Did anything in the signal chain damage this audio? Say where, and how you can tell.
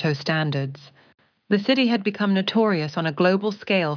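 No, nothing in the signal chain audibly damaged this audio. No stage, from capture to playback, leaves a mark that can be heard anywhere in the clip.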